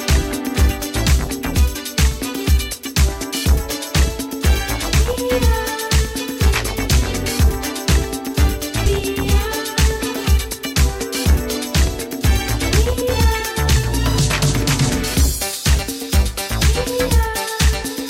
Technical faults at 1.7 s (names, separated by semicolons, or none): compressed frames skipped